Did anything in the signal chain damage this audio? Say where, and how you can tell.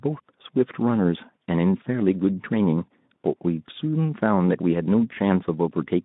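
No, nothing in the chain has damaged this speech; it comes across as a narrow-band Speex link at a fairly generous setting, with the top of the band stopping somewhere around 3.7 kHz as that kind of line does.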